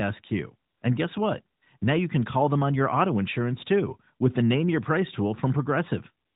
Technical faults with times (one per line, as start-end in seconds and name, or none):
0.70-0.82 AMR comfort noise
1.58-1.82 AMR comfort noise
6.26-6.35 AMR comfort noise